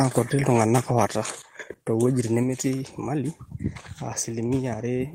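From 0.48 to 1.05 s the loudest syllables take on a harsh, crackling edge, likely microphone overload: peaks about 4 dB too hot, their tops flattened in a small fraction of samples. At 1.05 s voice and background abruptly drop by about 4 dB together, likely the microphone volume stepped down by the call software reacting to that clipping.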